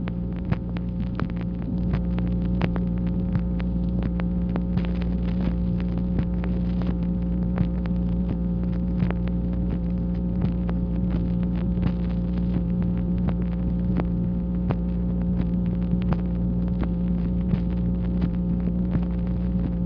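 No technical faults can be heard in this audio.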